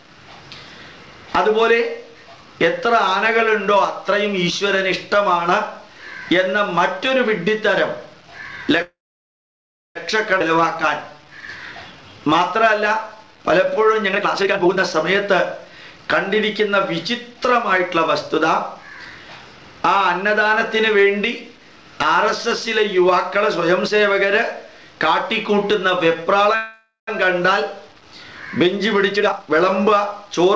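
From 8.82 to 9.97 s there is a call audio freeze, likely from delayed packets. A brief fading fill gives way to about one second of silence, and the audio then resumes where it stopped with nothing lost, unlike a skip.

At 10.39 s a skip ahead drops roughly 0.7 s of audio. The two sides are joined almost directly, so the audio jumps forward with no pause.

From 10.57 to 13.95 s a jitter buffer slow-down repeats pitch periods, adding 219 ms. The audio plays at 94% speed with unchanged pitch, so sounds are drawn out rather than lowered.

Jitter buffer speed-ups follow from 14.05 to 17.39 s at 117% (roughly half a second removed) and from 18.30 to 19.11 s at 106% (about 70 ms removed). The audio sounds hurried, but the pitch does not rise.

From 26.55 to 27.09 s a second, shorter call audio freeze inserts 0.52 s. The fading fill runs for most of it before about 0.13 s of silence.

A final speed-up from 28.67 to 30.54 s runs at 122%, removing roughly 0.4 s.

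Throughout, the G.722 call path leaves nothing above 8 kHz.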